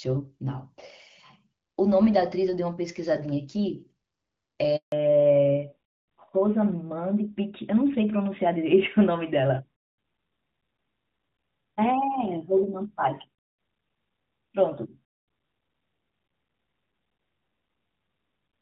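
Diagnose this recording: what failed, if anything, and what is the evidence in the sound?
At the network stage, a handover gap broke the call as the phone switched networks and no speech frames arrived for 160 ms, from 4.76 to 4.92 s. The speech dies away abruptly, and the audio stays silent until the new link delivers sound.

From 4.92 s to the end, the codec stage shows a fallback to narrowband: the call left HD Voice for an older narrowband codec. Nothing above 4 kHz remains, so the speech sounds duller and rougher than the clear wideband opening, consistent with AMR-WB at 12.65 kbit/s giving way to AMR-NB at 12.2 kbit/s.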